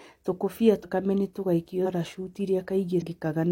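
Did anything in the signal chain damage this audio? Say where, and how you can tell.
Yes. The codec stage lost compressed frames: whole frames were missing or rejected as damaged, so the decoder skipped ahead. This compressed frames skipped fault shows at 0.79–0.85 s (right before "nĩ tũgaikio"), 1.81–1.87 s (just after "nĩ tũgaikio") and 2.98–3.02 s. The speech jumps forward by roughly half a second, a second, then half a second, which fits runs of about ten, twenty and ten 46.4 ms frames.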